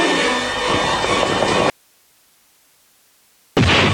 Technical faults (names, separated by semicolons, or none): audio dropout to a faint residue